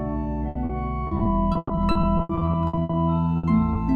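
At 0.49 to 0.57 s a burst of packet loss leaves about 60 ms of audio undelivered. The receiver keeps extending the last sound and lowers it, so the gap is heard as a held, fading tail before the audio picks up further on with that stretch gone.

At 0.65 to 0.71 s comes a short concealed packet loss. Roughly 40 ms arrives too late for the decoder, which patches it from the preceding sound and blends back, leaving a brief smear or wobble.

From 1.07 to 2.95 s, repeated packet loss produces a robotic sound. Nineteen separate holes, the longest 120 ms, are each filled by continuing the previous sound, with about 35 percent of the span synthesised. The result is choppy, with pieces missing throughout.

A second burst of packet loss at 3.37 to 3.45 s again drops about 60 ms into a decaying continuation. A final short concealed packet loss at 3.73 to 3.77 s covers about 20 ms and sounds like a brief smear or wobble.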